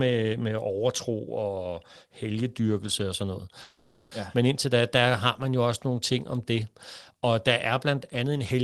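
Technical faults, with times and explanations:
3.61–4.14 s, call audio freeze: after "helgedyrkelse og sådan noget" a fading buzz fills 0.5 s, likely an emptied jitter buffer; speech resumes intact, half a second late.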